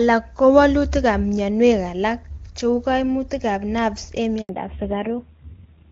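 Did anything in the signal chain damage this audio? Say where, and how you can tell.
Yes. At 4.41 s the speech fades out within a few tens of milliseconds and stays silent until 4.49 s, an 80 ms hole. That is a handover gap at the network stage: no speech frames reached the receiver while the call switched networks.

From 4.49 s to the end the speech suddenly sounds duller and rougher, with nothing above 4 kHz. This is a fallback to narrowband in the codec stage. The earlier wideband sound, clean enough to fit a high AMR-WB rate, gives way to a low-rate narrowband codec.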